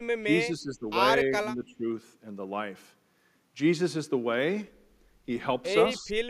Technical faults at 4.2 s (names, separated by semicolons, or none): none